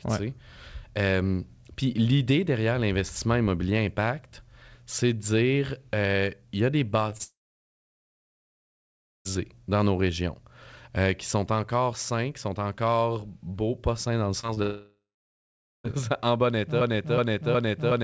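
At 7.10–7.13 s and 7.17–7.21 s, the second just after "il y a des", short concealed packet loss leaves brief smears. On the waveform they are small bridged notches, and on the spectrogram brief blurred harmonics. From 7.23 to 9.27 s a long network dropout, likely from lost call packets, fades the last sound into a decaying buzz or hiss, then about 1.9 s of flat silence. The waveform shows a near-empty gap, and the spectrogram a blank band. At 14.41–14.45, 14.47–14.51 and 14.55–14.58 s, after "pas sains dans le", three more concealed losses each smear about 20 ms. A second dropout follows from 14.62 to 15.86 s, with a brief fade and about 0.85 s of silence. From 16.81 s to the end a broken-record loop, likely a stalled stream, repeats a 0.37 s fragment exactly. The waveform and spectrogram show identical blocks tiled back to back. Throughout, the spectrogram is empty above 8 kHz, which fits a wideband call codec such as G.722.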